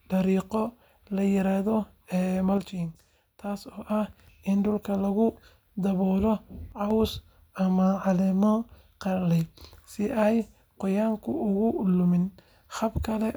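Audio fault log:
2.58–3.90 s and 6.72–6.91 s, one channel drops out: the speech falls abruptly by about 6 dB, then recovers. The cause is likely one stereo channel going silent. After the mono sum, only half the shared signal remains, so the level halves.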